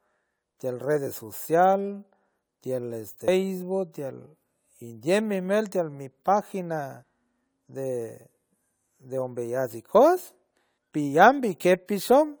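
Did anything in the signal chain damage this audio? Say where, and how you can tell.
Yes. At 3.28 s the speech jumps abruptly, with about a third of a second missing and the two sides joined with no silence. The likely cause is audio missing between chunks at the buffer stage, where a 4 s chunk closes and the next opens. A dropout would leave an audible gap.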